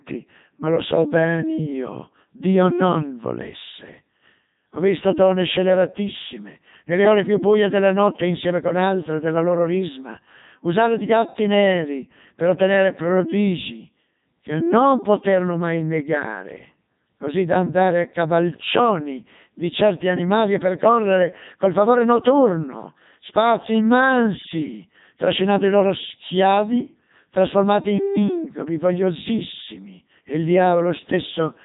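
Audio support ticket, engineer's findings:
Codec 2 vocoder, whole clip: robotic, buzzy speech with heavy codec damage; no content above 3.8 kHz. Decoder rebuilds the voice from sine waves using only pitch, voicing, energy and spectral envelope, so the original waveform is lost. Artefacts fit a 3.2 kbit/s mode.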